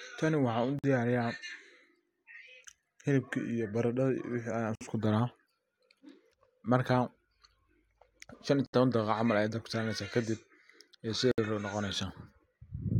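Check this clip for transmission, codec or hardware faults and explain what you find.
The speech has four short dropouts, each a gap at a join of encoded pieces. They fall at 0.79 s (about 49 ms), 4.75 s (about 57 ms), 8.66 s (about 69 ms) and 11.31 s (about 65 ms). The audio was encoded in separate pieces and joined untrimmed. Each piece keeps its encoder's leading delay and padded final frame. The result is a brief hole in the speech with smeared edges. The speech then resumes where it stopped.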